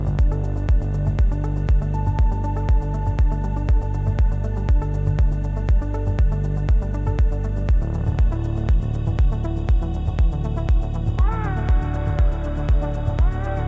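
Nothing here needs flagging, since no technical faults turn up anywhere in the recording.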